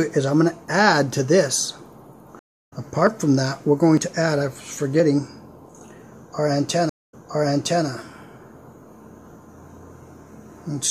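The clip carries two kinds of fault, starting with what is most likely a dropped buffer (overrun): the capture side fell behind and the hardware overwrote samples before they were read, so the audio on either side of each gap is butted together with no silence. This is heard as a jump forward at 1.56 s, where roughly 50 ms is lost, and as smaller skips of about 20 ms at 3.07, 3.97 and 5.00 s. Twice there is also a stream reconnect, where the connection broke and playback restarted mid-stream on a freshly started decoder. At 2.39 s the sound cuts out for 270 ms, then comes back around 0.3 s further on than where it stopped, so a short stretch is simply missing, and the first moments after the return fade in rather than starting at full level. At 6.89 s there is a 180 ms gap, after which the audio resumes 0.78 s earlier than where it broke off, so a portion that has already been heard plays a second time, through to about 7.86 s.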